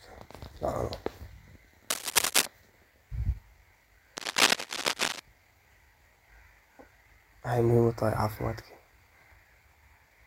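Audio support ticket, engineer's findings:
Cable scratch noise, 1.90–2.47 s and 4.17–5.20 s: dense, uneven scratching bursts over the speech, roughly as loud as the speech itself. Likely a worn cable or connector being moved, its contact resistance fluctuating rapidly and injecting noise into the signal.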